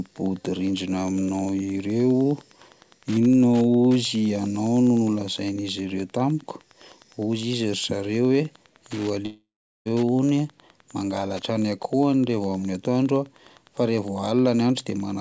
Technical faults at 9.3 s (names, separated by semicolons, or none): Wi-Fi interference; long network dropout